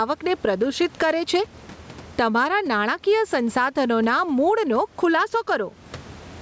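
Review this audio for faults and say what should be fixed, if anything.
Gain pumping runs through the whole speech clip: the input gain is likely set far too high, so a fast limiter clamps down on every loud syllable and releases in the gaps. The room noise sits about 35 dB below the speech, and the gain swings by around 15 dB, leaving the level squashed. Lower the microphone input gain so the limiter no longer acts on ordinary speech peaks.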